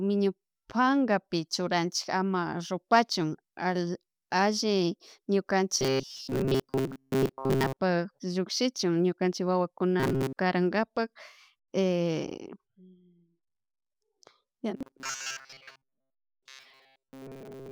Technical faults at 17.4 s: robotic sound from repeated short buffers

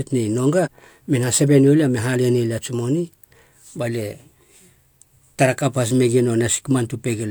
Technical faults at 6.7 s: none

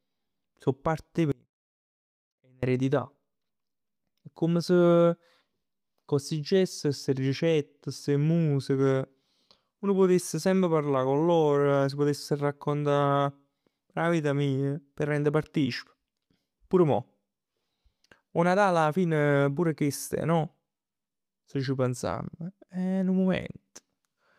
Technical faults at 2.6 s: audio dropout to a faint residue

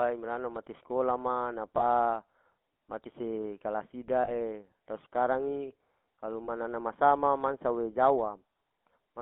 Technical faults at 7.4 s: GSM full-rate codec

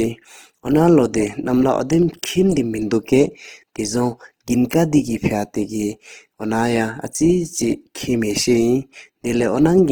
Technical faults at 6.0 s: Opus compression

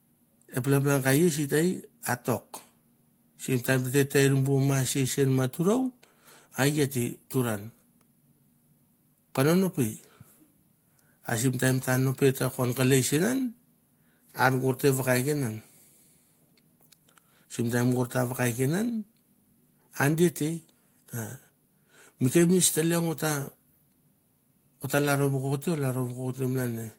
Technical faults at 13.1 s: none

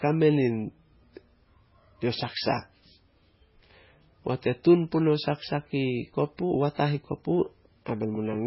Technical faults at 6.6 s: MP3 compression

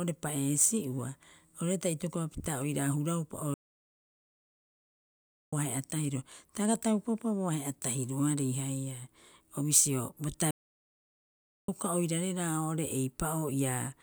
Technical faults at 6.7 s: none

